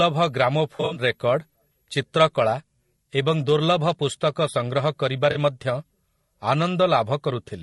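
From the start and throughout, a switching power supply is leaking an audible tone into the signal chain. It comes through as a thin, high switching supply whistle wandering between about 11.4 and 11.6 kHz, sitting roughly 40 dB below the speech.

Also throughout, the speech is held to a low bit budget, likely by low-delay AAC compression (AAC-ELD). Too few bits are left to code the voice's harmonics cleanly, which fits a rate near 32 kbps. The voice sounds plainly rough and grainy, with noise filling the gaps between harmonics and a dulled, somewhat synthetic top end.

Between 0.75 and 1.01 s, AAC frames go missing and the decoder fills the holes from the last good spectrum. About 140 ms is lost across 200 ms, with the longest gap roughly 70 ms. The result is a smeared patch. At 5.31 to 5.37 s a second, shorter 40 ms loss leaves a brief blurred smudge.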